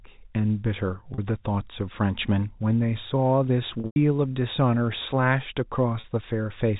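A brief held, buzzy smear at 1.14 to 1.18 s, a longer stretch at 3.80 to 3.96 s that buzzes, thins toward silence and then cross-fades back, and another short buzzy hold at 6.00 to 6.04 s. These are packet loss with pitch repetition. The receiver looped the last pitch period to cover 40 ms gaps, fitting two lost packets each. The middle event lost 140 ms across 160 ms, with a 100 ms run long enough for the repetition to fade out. The G.711 telephone band stays intact throughout.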